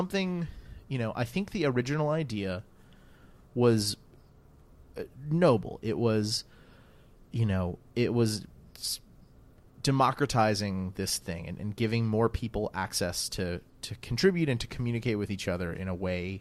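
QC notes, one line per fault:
No faults noted in this speech recording; nothing to flag.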